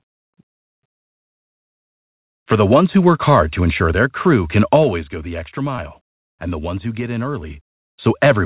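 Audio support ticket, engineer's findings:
Zipper noise, 4.72–5.16 s, after "ensure their crew can", before "the extra". Ticking on a downward level move of around 10 dB. Gain stage applying unsmoothed 2 dB steps, around 15 per second; each jump clicks. Fix: ramp gain per sample.

Short concealed packet loss, 5.76–5.80 s and 5.94–5.97 s, after "the extra", second before "and the ones who". Brief smears/wobbles in 4 kHz-limited G.711 audio. Jitter buffer/receiver: each gap is 20 ms, which fits one 20 ms packet arriving late or lost. Concealment extended prior audio for 16 ms and 12 ms, then blended back.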